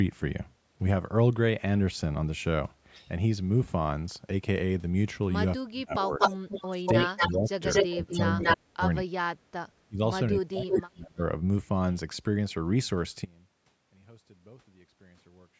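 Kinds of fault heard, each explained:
Speech suppressed in double talk: While both sides talk, the speech is pushed down, by as much as about 40 dB in places, likely because the echo canceller couldn't separate talker from echo.
Echo leak: A delayed copy of the speech returns, mostly about 242 ms late and near speech level, likely loudspeaker echo the canceller didn't fully remove.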